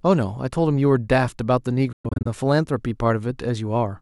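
Between 1.92 and 2.27 s the speech breaks into several short silent gaps, about 209 ms missing in total, the longest run 116 ms. It then continues as if it had played on. This is likely a Bluetooth dropout, with audio packets arriving too late and being discarded.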